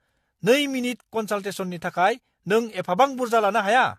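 From start to finish the speech sounds swirly, hollow and smeared, with blurred consonant attacks and nothing above 14.2 kHz. This is generation loss, likely from re-encoding about four times with AAC-LC at 64 kbit/s, each pass adding fresh quantisation noise.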